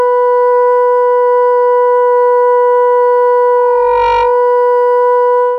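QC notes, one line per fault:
3.56–4.51 s loudspeaker feedback squeal: the mic-to-speaker loop exceeds unity gain at 933 Hz, so a single tone swells over about half a second to roughly the music's level.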